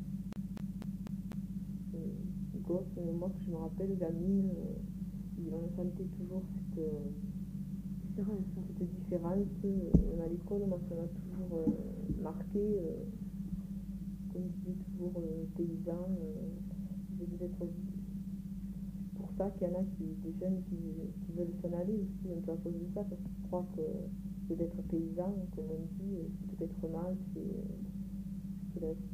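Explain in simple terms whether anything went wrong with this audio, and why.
From 0.33 to 1.57 s, the CD got stuck on one turn. A scratch replayed the same 0.25 s five times, with short gaps.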